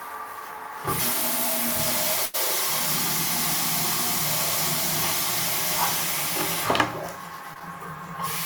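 A recording of everyday sounds with two network-loss faults. From 2.25 to 2.36 s a burst of packet loss leaves about 80 ms missing; the last sound is stretched and fades before the audio jumps ahead. That sustained, decaying fill distinguishes it from a short concealed packet loss at 7.54 to 7.57 s, where only about 20 ms goes missing and the patch passes as a brief smear rather than an audible gap.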